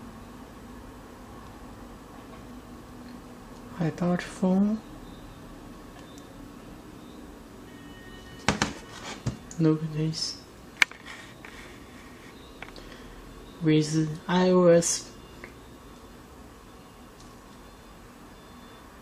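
Nothing stood out as a technical problem on listening to this audio.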